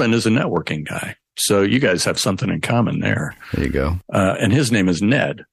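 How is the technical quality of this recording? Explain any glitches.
The recording has one fault, mild hard clipping that runs through the whole clip. Hard clipping, present throughout: the signal is driven about 1 dB past what the recording chain can pass, so the tallest peaks are sliced flat instead of rounding over. Only a very small share of samples, well under one percent, hit that ceiling. Each flattened top adds high harmonics, heard as brief crackle or grit on the loudest moments, not as continuous fuzz.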